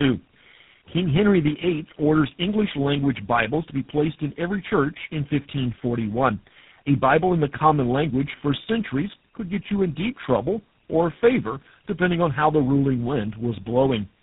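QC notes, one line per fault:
Throughout: tandem speech coding. The speech sounds rough, muffled and warbly, with nothing above 3.9 kHz. Each coder re-encodes the previous one's damaged output, so the errors stack. The sound fits three low-rate speech codecs in a row, ending in GSM full rate.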